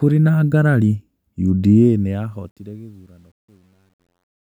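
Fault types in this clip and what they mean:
Truncation distortion on a fade: the speech fade-out grows gritty from 1.81 s and is worst from 2.82 s to 4.53 s. The fade stage rounds its output without dither, which fits a 10-bit stage.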